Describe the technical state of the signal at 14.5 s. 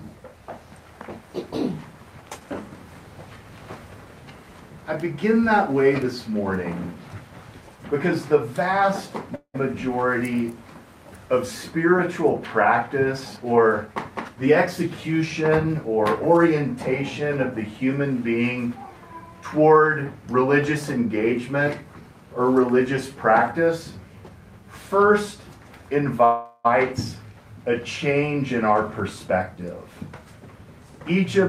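A jitter buffer speed-up runs from 13.36 to 15.74 s. The receiver trims short pitch-period slices repeatedly to shed excess buffered delay, about a fifth of a second in total, so the audio plays about 8% faster at unchanged pitch and sounds hurried.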